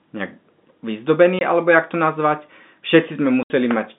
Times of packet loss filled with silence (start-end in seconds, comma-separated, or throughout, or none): 1.39-1.41, 3.43-3.50